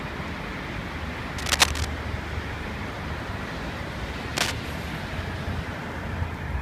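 Cable scratch noise breaks into the sound twice, from 1.38 to 1.85 s and from 4.37 to 4.52 s, as dense, uneven scratching that rises a little above the sound itself, likely from a worn cable or connector being moved. Unlike isolated clicks or steady crackle, each burst is a short rustling cluster.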